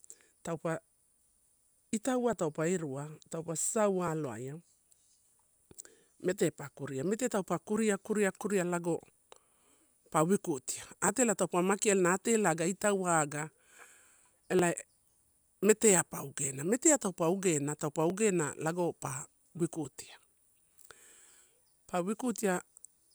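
From 0.57 s to 21.6 s, a click or pop recurs in the speech at a steady 1.75 s interval. About fifteen occur in all. The regularity points to clock drift buffer slips as the likely cause. Two devices seem to run on separate clocks that differ by several hundred parts per million. The buffer between them drifts until a short block of samples, about 70 at a time, is dropped or repeated. Each slip is heard as a click.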